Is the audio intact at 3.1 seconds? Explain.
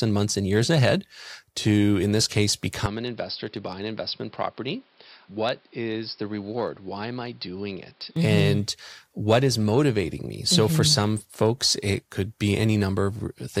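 No. An input switched to a poorer device runs from 2.86 to 8.16 s, likely a change to another microphone mid-recording. Nothing passes above 5.4 kHz, so the speech turns dull and boxy, drops about 10 dB, and gains a faint new noise floor, with no gap at the switch.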